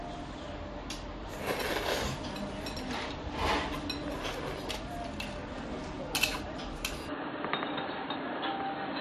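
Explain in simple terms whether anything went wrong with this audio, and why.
Something does go wrong near the end. At about 7.09 s the sound abruptly turns duller and boxier and stays that way to the end of the clip. Nothing above roughly 4.3 kHz gets through, the level shifts noticeably, and a faint new background noise appears. There is no gap at the change. This points to an input switched to a poorer device, likely another microphone or a headset's call mode, with a narrower range and its own noise.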